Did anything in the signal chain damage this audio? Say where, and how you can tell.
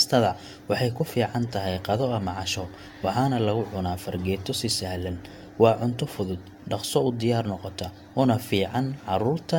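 Yes. Generation loss throughout, at the codec stage: hollow, swirly speech with blurred attacks and nothing above 17 kHz, likely from roughly five AAC re-encodes, each adding fresh quantisation noise.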